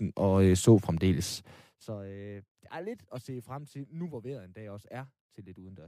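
At 3.17 s the speech is broken by a brief glitch lasting about 12 ms, the mark of damaged data in a compressed stream. Corrupted bytes in one stretch left the decoder unable to read those frames, so it lost sync and skipped ahead to the next valid frame header.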